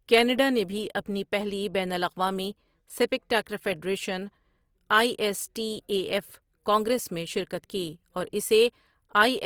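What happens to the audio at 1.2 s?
At 1.2 s the speech carries the same coding damage heard through the whole clip, likely Opus compression in its music (CELT) mode. The encoder keeps each band's energy but fills underfunded bands with folded or noise-like content, so voiced sounds come across grainy and rough rather than hollow or swirling. The bandwidth stays full, reaching about 20.4 kHz, and the plainly audible texture fits a bitrate around 24 kbps.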